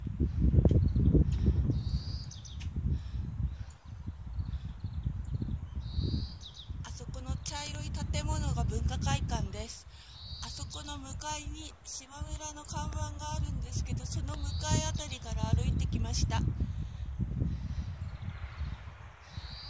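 Nothing goes wrong anywhere in the clip, so there's no technical fault to point to at any moment.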